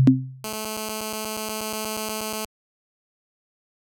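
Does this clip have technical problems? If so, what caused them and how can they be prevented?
Yes. GSM phone buzz from 0.44 to 2.45 s: a nearby 2G phone's 217 Hz transmit bursts, rectified by the audio circuit, give a steady raspy buzz about 10 dB below the signal. Keep phones away from the recording chain or switched to airplane mode.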